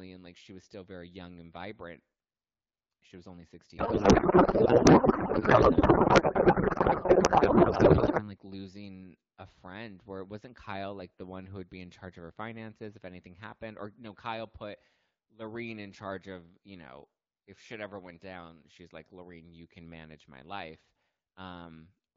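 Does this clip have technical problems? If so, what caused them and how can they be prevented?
Yes. A codec payload misread runs from 3.77 to 8.29 s, starting right after "was only" and clearing just before "like losing a friend". For those 4.5 seconds the speech turns to garbled noise and warble that barely tracks it. The AMR wideband stream was packed octet-aligned, but the receiver read it as bandwidth-efficient. Every field landed in the wrong place, yet the frames still decoded. Outside that stretch the wideband audio is clear, which fits a rate around 12.65 kbit/s. To prevent this, make sure both ends negotiate and honour the same AMR payload format, octet-aligned or bandwidth-efficient, in the session setup.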